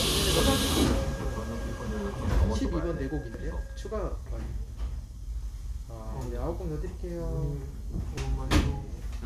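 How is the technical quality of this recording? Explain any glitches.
The recording has three brief glitches, all caused by damaged data in a compressed stream. They occur at 0.40, 3.34 and 8.18 seconds. Each lasts only a few milliseconds. At each point, part of the compressed data was wrong. Bytes may have been lost, zeroed or overwritten. The decoder could not read those frames correctly. It lost sync and had to find the next valid frame header. The result is a short chirp or blip that cuts into the sound.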